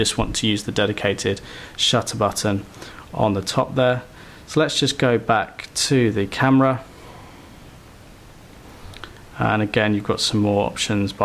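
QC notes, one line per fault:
No faults found. Nothing in the audio calls for a QC entry.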